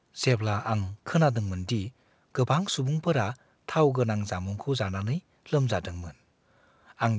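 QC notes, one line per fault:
No faults are present: the speech arrives over a call path whose content stops at 8 kHz, which fits a wideband codec along the lines of G.722 at 64 kbps, and the signal stays continuous and steady throughout.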